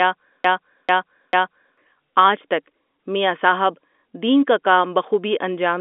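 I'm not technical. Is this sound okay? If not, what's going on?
No. Right from the start, something in the chain, most likely the player or the stream, stalled and kept replaying the last bit of speech it held. This is a broken-record loop: a piece about 0.44 seconds long repeats three times back to back, already under way when the clip opens and ending at 1.78 s. Whatever should have been heard during that stretch is gone. The narrow, phone-like sound throughout comes from ordinary telephone coding.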